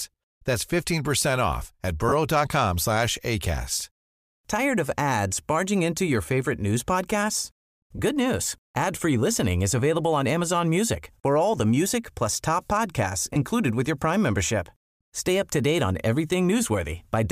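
Lost LE Audio frames occur at 2.09–2.13 s, at 7.96–7.99 s after "your favorite news podcasts", and at 13.34–13.36 s between "music plus top podcasts" and "with your". Each gap, about 30 ms, 30 ms and 20 ms, fits missing 10 ms frames, which the decoder patches with a brief, grainy smear of the previous spectrum.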